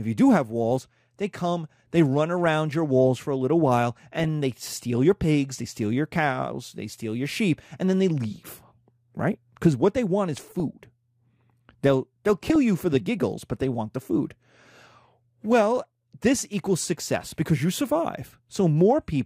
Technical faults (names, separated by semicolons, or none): DAB burbling